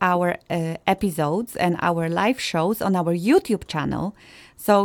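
No technical faults can be heard in this speech recording.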